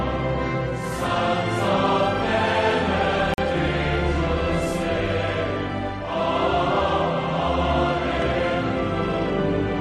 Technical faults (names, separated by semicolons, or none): Bluetooth stall; dropped buffer (overrun)